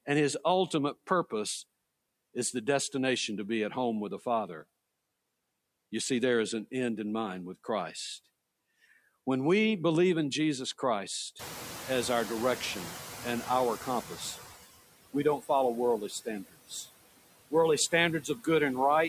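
Noise suppressor artifacts run through the whole of this speech recording. The suppressor pulls down, about 19 dB, whatever bands it judges to be steady noise, working frame by frame. The residue pumps, sinking in the gaps and swelling back under the talker. Noise suppressor catching up follows from 11.39 to 14.5 s. The room noise jumps by about 22 dB near 11.5 s, ending up only about 15 dB below the speech, and the suppressor's noise estimate trails the change. For roughly 3.1 s the louder background leaks through with only about 12 dB of reduction before the estimate settles and the noise sinks again. Speech cut by the noise suppressor then appears four times, at 15.13–15.5 s (about 13 dB down), 16.08–16.27 s (about 18 dB), 16.44–16.88 s (about 20 dB) and 18.21–18.47 s (about 12 dB). The suppressor mistakes short, quiet stretches of speech, each lasting a fraction of a second, for background. 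It turns them down with the noise, so those sounds come across swallowed and faint.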